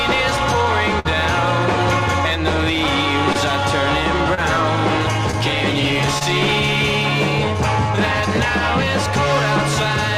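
At 0.99 s a burst of packet loss begins and runs to 1.07 s. A run of packets never arrived in time. The receiver stretched the last sound for about 53 ms, fading it down as it went. That gives a brief held buzz or dying hiss. Then the audio jumps ahead, with about 40 ms of the original simply gone.

Short concealed packet loss follows at 3.33 s, 4.34 s, 5.31 s and 6.19 s. Each time about 20 ms of the call never reached the decoder in time. The receiver patched it by extending the preceding sound and blending back in. The patches last about 17, 29, 12 and 20 ms. Each is heard as a quick smear or wobble.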